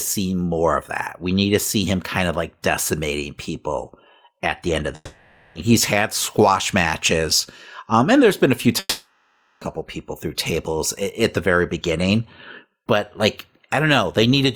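Speech with two gaps that point to a likely long network dropout: audio stopped arriving at 4.95 s and at 8.79 s. Each time, after "at the end of" and after "there's been a few", a fading buzz fills about 0.6 s and 0.82 s, a brief silence follows, and speech resumes at "he's had squash matches" and "people through tables at" with those stretches lost.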